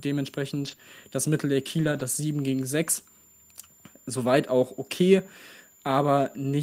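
Speech carries a steady high whistle throughout, a switching supply whistle near 7.1 to 7.2 kHz, sitting roughly 30 dB under the voice. Its slight pitch wander within that band, rather than a fixed line, sets it apart from a constant electrical tone. Around 0.63 to 0.73 s, at 0.79 to 0.81 s, and again from 1.79 to 2.01 s, the audio turns rougher and noisier without any gap. That is a lost packet rebuilt from error correction, with low-bitrate backup copies covering about 60, 20 and 120 ms. The lack of any hole is what separates it from concealment. Between those first two patches, at 0.75 to 0.79 s, a brief smear marks a short concealed packet loss: about 20 ms never arrived, and the decoder extended the preceding sound before blending back.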